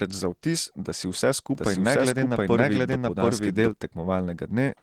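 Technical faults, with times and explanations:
throughout, Opus voice compression: speech sounds hoarse and faintly robotic, because 16 kbps hybrid coding quantises the excitation coarsely, though the band still reaches about 20 kHz.
1.55 to 3.71 s, doubled audio track: speech is heard twice, with a dry copy of equal loudness about 0.7 s behind, cutting in and out abruptly. The likely cause is a slower second capture path mixed in.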